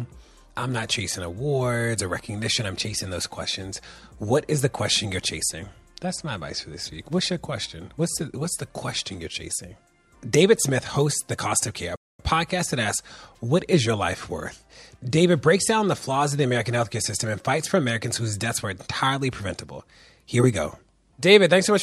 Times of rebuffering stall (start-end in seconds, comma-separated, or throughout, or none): 11.96-12.20